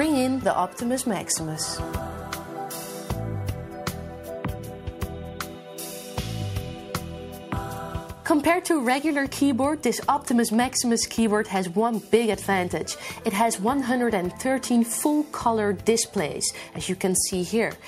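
Nothing in the audio stood out as a technical problem on listening.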